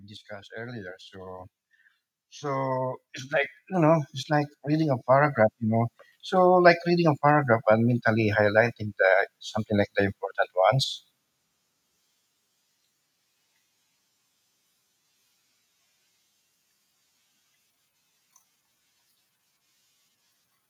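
From 0.27 to 1.57 s, then from 2.18 to 5.91 s, automatic gain rising lifts the level by about 5 dB and then about 12 dB, as the control judges the input too quiet. Unlike a compressor's quick pumping, voice and background noise swell together, slowly.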